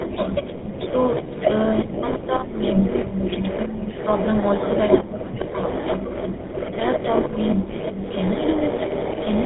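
Throughout, tandem speech coding, GSM full rate twice with G.711 between, makes the speech rough, muffled and warbly. The spectrogram shows nothing above 3.9 kHz and smeared formants. From 0.0 to 0.11 s, and again from 0.85 s to the end, an echo leak, likely from a loudspeaker side, returns a copy of the speech about 400 ms late, at about 10 dB and then about 5 dB below it. The spectrogram shows repeated patterns. At 0.12–0.84, 1.84–3.11, 3.65–3.95 and 5.03–5.48 s the speech is suppressed in double talk, likely by the echo canceller. It dips by up to roughly 30 dB, and the waveform shows notches in its envelope.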